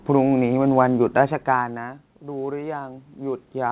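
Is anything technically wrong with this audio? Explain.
Yes. There is automatic gain rising from 1.17 s to the end of the clip. Just before it, around 1.0 s, the level reaching the microphone drops by about 18 dB, as a talker leaning back would cause. The automatic gain control hears the quieter input and raises its gain step by step. So the speech and the room noise swell up together, slowly, over the last two and a half seconds.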